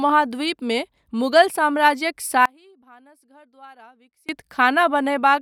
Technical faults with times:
2.45-4.29 audio dropout to a faint residue

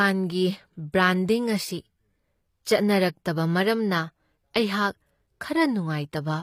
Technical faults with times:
0.00-6.42 HE-AAC compression

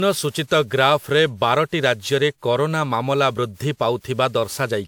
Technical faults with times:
0.00-4.88 generation loss

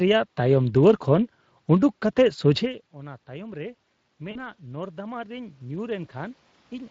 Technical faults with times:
0.00-6.91 Speex codec
2.59-6.86 automatic gain rising
4.31-4.39 VoIP packet loss concealed by the speech codec

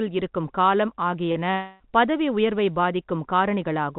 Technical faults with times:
1.51-1.83 long network dropout

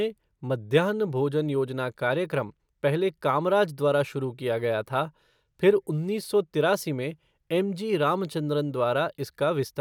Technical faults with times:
none

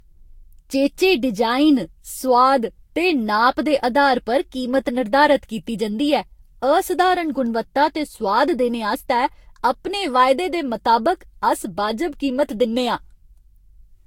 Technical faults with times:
0.00-14.07 generation loss

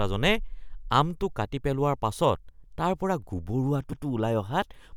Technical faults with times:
3.92-4.05 repeated frames

